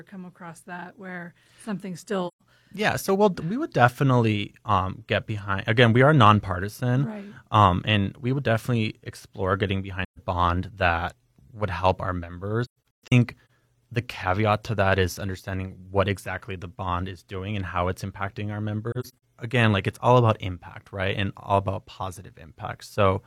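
Soft-edged holes open in the speech at 2.27–2.42 s, 10.04–10.19 s, 12.65–13.49 s and 18.91–19.13 s. This is AAC frame loss with muting. Lost frames decode as silence. Overlapping windows fade the sound out and back in. The first two gaps are single runs of about 128 ms. The last two are clusters of short dropouts, with the longest runs roughly 150 ms and 100 ms.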